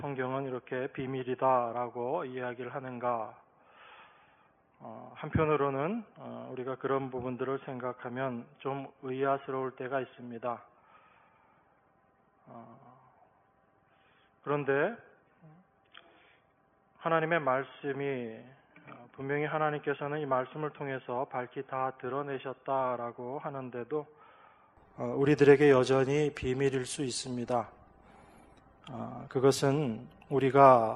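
An input switched to a poorer device from the start to 24.77 s: nothing above 3.4 kHz survives, so the sound is dull and boxy, roughly 5 dB quieter, and carries a faint new noise floor far below the signal. This points to the system having likely taken its input from a narrowband microphone or headset call profile, then switching back at 24.77 s with no gap, where the full bandwidth suddenly returns.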